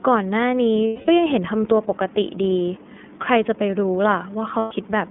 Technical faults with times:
0.00-5.10 iLBC codec
0.88-1.09 lost iLBC frames
4.58-4.72 lost iLBC frames

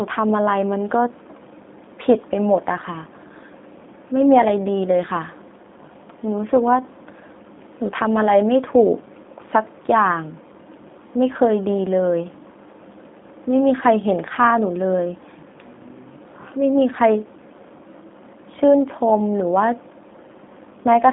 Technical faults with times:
0.00-21.12 G.729 codec

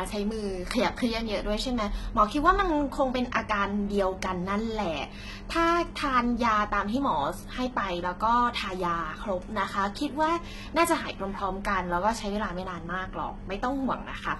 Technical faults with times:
0.00-14.39 HE-AAC compression

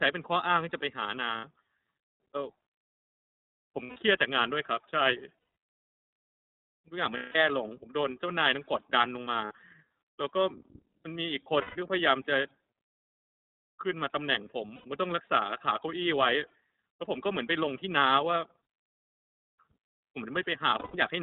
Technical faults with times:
0.00-21.23 iLBC codec
1.38-1.45 lost iLBC frames
3.84-3.96 lost iLBC frames
5.39-5.57 lost iLBC frames
7.17-7.36 lost iLBC frames
9.45-9.51 lost iLBC frames
11.61-11.77 lost iLBC frames
14.75-14.85 lost iLBC frames
20.69-20.97 lost iLBC frames

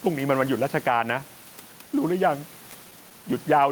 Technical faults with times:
0.00-3.71 gain pumping
2.71-3.26 scattered short gaps

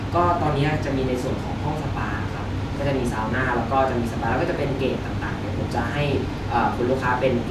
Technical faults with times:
none

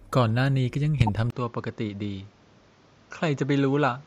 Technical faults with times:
1.00-1.09 corrupt frame decoded
1.30-4.06 input switched to a poorer device

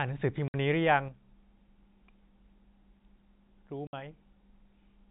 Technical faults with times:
0.48-0.54 packet loss filled with silence
3.87-3.93 packet loss filled with silence

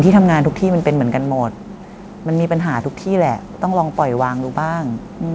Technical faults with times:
0.05-1.78 automatic gain falling

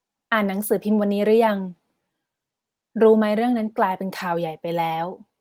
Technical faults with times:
4.19 lost packet rebuilt from error correction

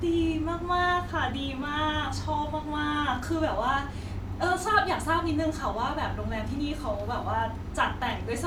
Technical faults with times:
none

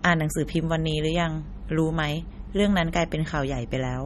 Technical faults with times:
0.00-4.05 MP3 compression

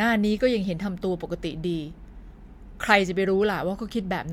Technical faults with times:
none

